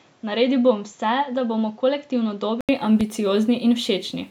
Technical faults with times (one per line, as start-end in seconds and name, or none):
0.00-2.69 input switched to a poorer device
3.01-3.04 loud pop